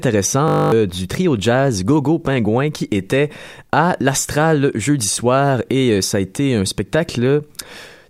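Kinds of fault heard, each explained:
System hang loop: a frozen system replays one 20 ms buffer twelve times, a 50 Hz buzz before "du trio jazz", unlike a silent dropout.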